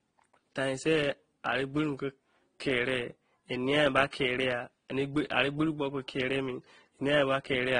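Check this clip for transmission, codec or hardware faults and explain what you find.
There's one fault, and it runs through the whole clip: transcoding between lossy codecs. Nothing gets above 9.8 kHz, and the speech carries two different sets of codec artefacts at once. That points to a low-rate Opus encode, around 16 kbit/s, likely re-encoded to AAC-LC at about 32 kbit/s, with the second encoder wasting bits on the first one's damage.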